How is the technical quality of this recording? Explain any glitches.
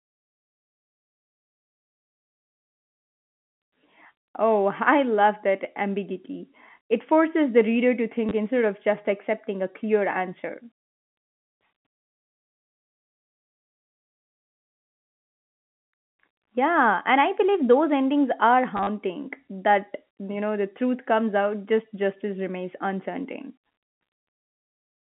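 The recording has two short dropouts, heard over a telephone-band signal that sits between about 150 Hz and 3.4 kHz.

Packet loss with last packet repeated occurs at 8.3 s, between "forces the reader to" and "instead of just accepting", and from 18.77 to 18.87 s, after "believe those endings are". When packets went missing, the receiver replayed the last good packet. The first gap is 20 ms. The second loses 60 ms spread over 100 ms, with its longest run at 40 ms. The sizes fit 10 ms packets. The repeated chunks seldom line up with the pitch, and the sound briefly stutters.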